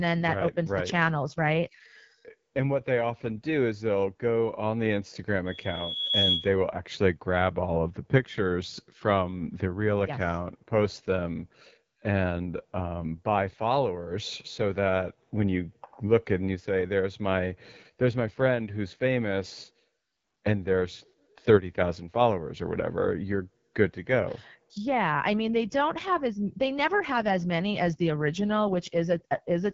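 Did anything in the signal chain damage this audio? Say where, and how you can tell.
Yes. At the codec stage, the whole clip sounds rough and raspy, with nothing above 7.6 kHz. That's the AMR wideband (HD Voice) codec at a low rate, which fits 8.85 kbit/s.

Acoustically, at the playback end, there's a loudspeaker feedback squeal from 5.46 to 6.56 s, just before "will actually grab all". A 3.4 kHz tone swells over roughly 0.7 s and peaks a few dB above the speech, because the mic-to-speaker loop gain exceeded one.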